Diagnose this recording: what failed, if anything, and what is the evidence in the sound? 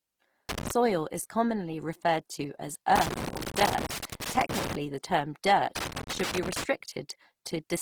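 Codec stage: the whole clip carries a grainy, rough texture, with tonal parts of the speech turned noisy rather than swirly, while bandwidth stays full to about 20.3 kHz. This is likely Opus compression in its music mode, filling starved bands with folded or noise content, consistent with a low bitrate near 16 kbps.

Analogue wiring stage: loose connector crackle appears as irregular bursts of scratching from 0.49 to 0.71 s, just before "is commonly referred to", from 2.96 to 4.75 s, after "commonly referred to as", and from 5.76 to 6.64 s, after "the term". An intermittent contact repeatedly chops the signal.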